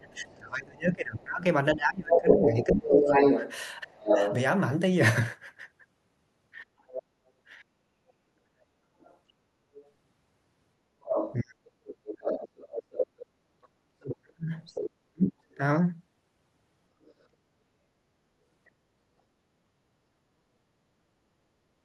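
From 0.02 s to 18.69 s, a second voice runs under the speech at roughly the same level as the talker: the other side's voice leaking through. It is likely loudspeaker playback that the echo canceller failed to subtract from the microphone. Unlike a crosstalk or mixing fault, it is sound replayed into a room and partly processed, and it disappears once the far side stops.

From 0.11 s to 15.62 s, the talker's own speech keeps dipping and breaking up, about 5 seconds in total, sometimes dropping by around 40 dB. This is speech suppressed in double talk, likely because the canceller could not tell the talker from the echo while both were active and turned everything down. Compared with plain dropouts, the losses follow the overlaps with the leaking voice.

At 7.64 to 7.77 s the room background drops by about 24 dB, and at 20.15 to 20.27 s by about 21 dB, each returning within a fraction of a second. 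This is background gated by the echo canceller clamping the microphone while the loudspeaker plays. It differs from double-talk suppression because what vanishes is the ambient sound, not the talker.

At 20.55 to 20.6 s, a brief second instance of speech suppressed in double talk cuts the talker by about 25 dB for roughly 50 ms.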